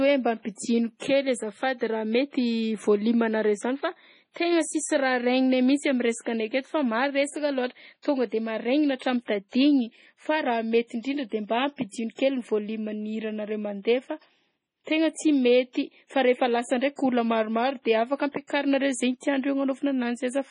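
From start to finish the speech has nothing above 10.6 kHz and a heavy watery, swirling texture, with sibilants turning metallic and chirpy. This is likely MP3 compression at a very low bitrate, in the region of 24 kbps. Short of bits, the encoder cuts the treble at a fixed point and drops weak frequency lines that flicker on and off between frames, smearing consonant attacks.

Pre-echo appears at 8.02 s, 12.15 s, 15.73 s and 18.47 s. Each time, a short hiss of 24 to 34 ms comes just before a sharp onset. The quantisation noise meant to be covered by the loud attack is spread across the whole transform block, so it also fills the quiet moment ahead of it. The attack itself sounds softened and blurred.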